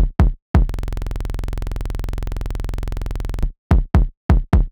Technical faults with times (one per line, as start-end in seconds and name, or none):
0.69-3.43 system hang loop